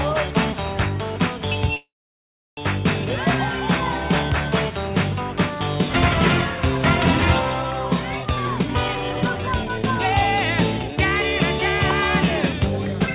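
Packets were likely held up in transit and the jitter buffer ran dry at 1.76 s. This call audio freeze lasts until 2.6 s. A brief continuation of the last sound fades into about 700 ms of silence. The audio then resumes where it stopped, now running about 810 ms late with nothing lost.

After delayed audio piled up in the buffer, the receiver trimmed repeated pitch-period slices to catch up. This jitter buffer speed-up runs from 8.22 to 10.13 s at 136% speed, dropping roughly 0.7 s, and again from 12.42 to 13.08 s at 109%, dropping roughly 70 ms. The sound hurries at unchanged pitch, heard through the G.711 call path's 4 kHz band limit.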